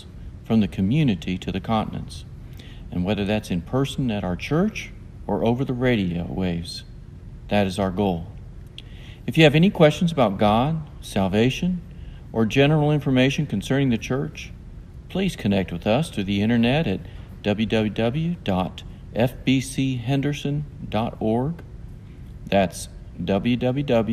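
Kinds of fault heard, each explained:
DAB burbling: a brief watery blip at 11.44 s, from bit errors that slipped past error correction and put short noise blips in single sub-bands; unlike a click, it sits in single sub-bands.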